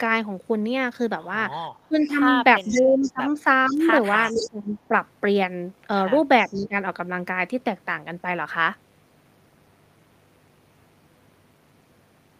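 From 1.88 to 4.91 s, speech suppressed in double talk pulls the voice down by up to about 20 dB in broken patches, likely because the echo canceller could not separate its own talker from the loudspeaker echo and turned both down while they overlapped. The waveform shows notched, shrunken envelopes, and the spectrogram shows thinned upper bands. Inside that span, echo leak returns a faint delayed copy 471 ms behind the voice: a brief scrap at 2.01 s about 25 dB down, then longer stretches from 2.62 to 3.10 s and from 3.66 to 4.49 s about 15 dB down. This is likely an incompletely cancelled loudspeaker path, and it appears as faint, time-shifted duplicates of the harmonic striations. Echo leaks again from 6.46 to 6.68 s, about 25 dB down, overlapping a short suppression from 6.52 to 6.75 s that dips the level by about 15 dB.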